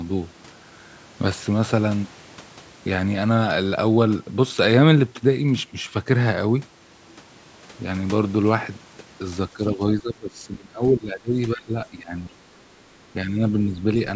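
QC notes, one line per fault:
9.53–9.81 s, 10.01–11.33 s, 11.55–12.66 s, 13.25–13.4 s: speech suppressed in double talk. The speech dips by up to about 20 dB, showing as a collapsing waveform envelope and thinning spectrogram energy, likely from an echo canceller ducking this side's speech along with the loudspeaker echo during overlapping talk.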